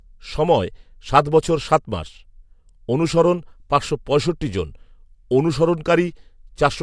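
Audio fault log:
No technical fault can be heard at any point in the speech signal.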